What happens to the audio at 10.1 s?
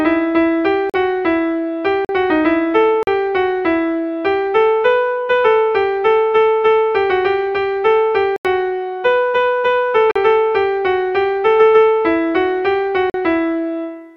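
A block of digital silence from 10.11 to 10.16 s: about 43 ms of silence, fitting an unfilled 2048-sample buffer, cut without fade.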